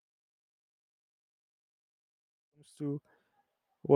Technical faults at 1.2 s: none

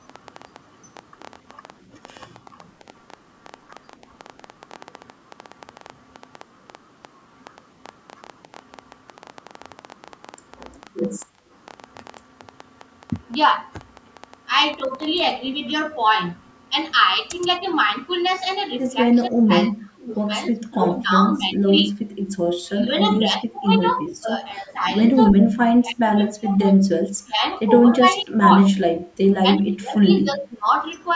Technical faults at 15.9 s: none

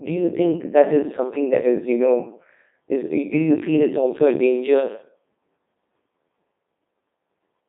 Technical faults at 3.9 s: Codec 2 vocoder

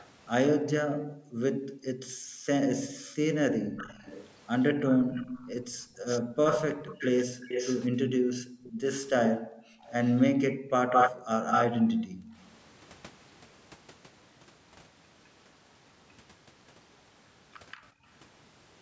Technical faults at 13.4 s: none

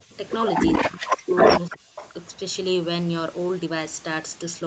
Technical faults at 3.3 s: none

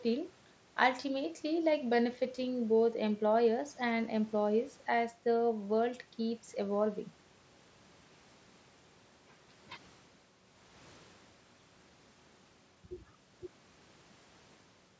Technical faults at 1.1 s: none

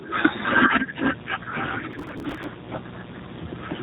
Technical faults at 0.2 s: G.729 codec

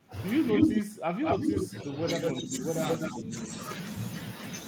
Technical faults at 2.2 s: echo leak

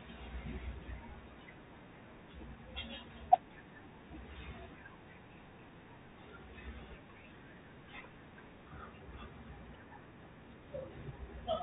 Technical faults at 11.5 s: Bluetooth CVSD headset codec

